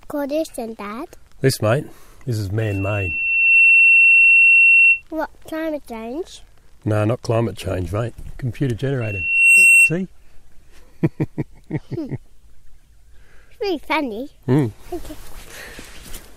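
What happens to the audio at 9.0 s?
A loudspeaker feedback squeal starts at 9.01 s and runs until 9.93 s. The microphone is catching its own loudspeaker output, and around 2.7 kHz the loop gain exceeds one, so that tone feeds on itself, swelling over about half a second to roughly 15 dB above the surrounding sound. A spectrogram shows a single bright horizontal line at 2.7 kHz thickening as it grows, and the waveform's envelope balloons during that span.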